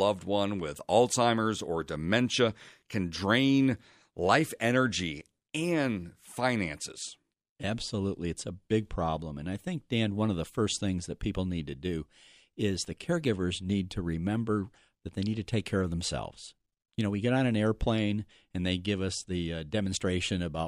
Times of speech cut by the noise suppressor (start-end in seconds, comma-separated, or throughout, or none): none